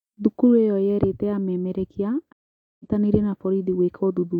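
Right after "ĩyo yerĩte amemerekia", at about 2.33 s, the speech cuts out and stays silent for roughly 0.47 s, until 2.86 s. That's a stream reconnect: the connection dropped, the player went quiet, then reconnected and spun up a fresh decoder mid-stream. Because it's picking up a live feed, the speech comes back at a later point, skipping ahead by something like 0.4 s. So you hear a gap followed by a jump, not a clean pause.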